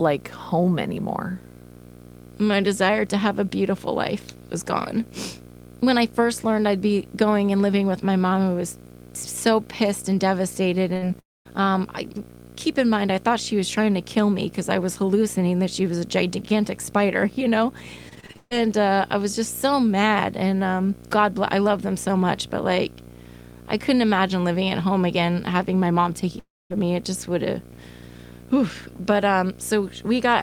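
Video or display buzz runs through the whole recording: a screen or video cable couples a 60 Hz field-rate buzz with hash above it into the audio, at about 20 dB below the speech.

Short concealed packet loss at 10.93 to 10.97 s, just after "so pissed and devastated": about 20 ms never arrived, and continuing the last sound over it leaves a brief smear.

A burst of packet loss follows at 10.97 to 11.04 s. The receiver stretches the preceding sound over the 48 ms hole as a fading buzz or hiss, then resumes further on.

A long network dropout at 11.20 to 11.47 s, just before "um I keep in", likely lost about 260 ms. A fading continuation gives way to roughly 220 ms of silence.

Repeated packet loss (robotic sound) at 18.09 to 18.53 s: six gaps, the longest 141 ms, are patched back to back. Over half the span is concealed, so it sounds choppy.

A second long network dropout, at 26.39 to 26.72 s right after "again having my mom", likely lost about 320 ms. 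The patched sound fades into roughly 240 ms of silence before the audio returns.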